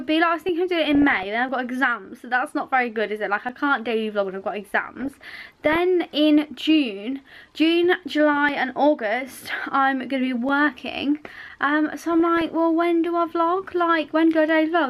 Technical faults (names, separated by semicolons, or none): DAB burbling